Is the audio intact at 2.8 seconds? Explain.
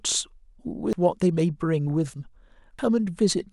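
No. At 2.79 s the speech jumps abruptly forward, likely a dropped buffer (overrun) that lost about a tenth of a second before capture.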